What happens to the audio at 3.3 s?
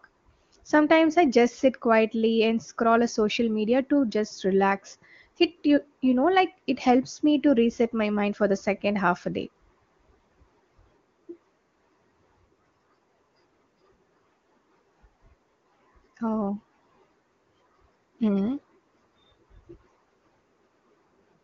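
At 3.3 s the speech comes through intact, carried by the AMR wideband (HD Voice) codec at 23.85 kbit/s, with no audible fault at that moment.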